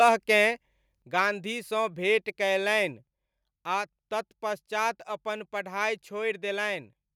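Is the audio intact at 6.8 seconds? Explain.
Yes, the audio is intact at 6.8 seconds, without any audible fault.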